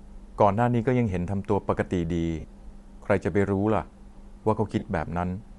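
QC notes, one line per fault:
Throughout: Bluetooth LC3 compression, likely the cause of the plainly audible codec damage on this speech. The top end sounds thinned and refilled with hiss, giving a grainy, breathy edge, which fits LC3 running around 48 kbps with 10 ms frames.
2.40–2.44 s and 4.79–4.82 s: lost LE Audio frames. Short gaps of 40 ms and 30 ms, roughly four and three 10 ms frames, where the decoder repeats the last spectrum with scrambled phase, so the speech briefly turns to a noisy smear.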